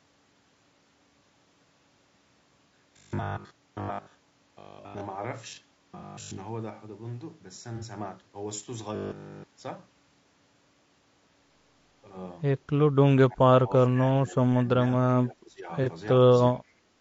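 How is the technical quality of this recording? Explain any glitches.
The technical quality is poor, with several overlapping faults.

Low-delay AAC compression is present throughout. The speech sounds rough and grainy, which fits AAC-ELD at around 32 kbps. On a spectrogram, noise fills the gaps between the harmonics and the top band looks thin.

Robotic sound from repeated short buffers occurs from 2.25 to 5.01 s, 5.49 to 6.39 s and 8.96 to 9.44 s. The speech becomes a metallic 50 Hz buzz, with the repeats fully taking over in the last span. This is likely caused by 20 ms buffers being repeated. A spectrogram shows rigid, evenly spaced harmonic lines.

AAC frame loss with concealment occurs at 5.99 to 6.04 s (30 ms), 7.76 to 7.85 s (60 ms) and 15.83 to 15.88 s (30 ms). The decoder rebuilt the missing audio from the previous spectrum, so each gap sounds smeared and noisy. A spectrogram shows short, blurred vertical patches.

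Speech suppressed in double talk occurs at 13.09 to 14.65 s, 15.09 to 15.70 s and 16.55 to 16.64 s. The level dips by roughly 25 dB, and by about 10 dB in the last instance. The likely cause is an echo canceller muting the talker while the other side spoke. The waveform envelope visibly collapses in these stretches.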